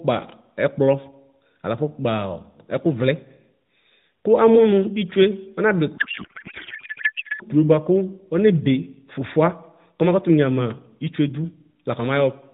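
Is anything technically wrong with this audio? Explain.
Yes. From 5.98 to 7.43 s there is a codec payload misread. The speech becomes garbled noise and warble that barely tracks what was being said. The sender and receiver disagree on how the codec bits are packed. This pattern points to octet-aligned AMR being read as bandwidth-efficient. The decoder takes each frame as valid but finds its fields shifted. It then synthesises nonsense from misplaced parameters. Around this, the band-limited AMR narrowband sound shows only light coding damage.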